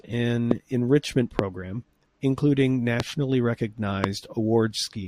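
Four loud pops hit the speech at 0.51–0.53, 1.39–1.41, 3.00–3.02 and 4.04–4.06 s. Each is a single sharp crack roughly 20 dB above the level, with talking continuing underneath. They're likely voltage spikes from static, a switch or a driver glitch.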